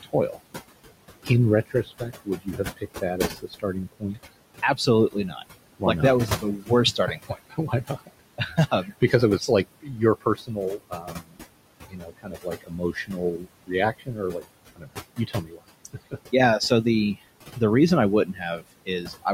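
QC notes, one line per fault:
Throughout: noise suppressor artifacts. The room background drops away in the gaps between phrases and swells back up under the speech, so the noise floor pumps with the talking instead of staying steady. The suppressor treats that steady background as noise and pulls it down by about 21 dB frame by frame wherever the speech stops. The room noise itself, roughly 14 dB under the voice, is part of the recording, not a fault.
0.03–0.37 s, 1.66–5.43 s, 6.28–9.49 s, 9.82–11.38 s, 11.88–16.15 s and 18.25–19.26 s: speech cut by the noise suppressor. Quiet consonants and word tails go faint or vanish, for example right after "like not that", in the stretch ending just before "yeah so the the", and following "the the reason I". The suppressor mistook these low-level speech parts for background and lowered them by about 16 to 22 dB. Each stretch loses from a fraction of a second to about two seconds.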